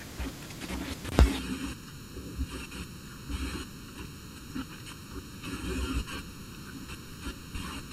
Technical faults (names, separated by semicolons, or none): channel delay (comb filtering)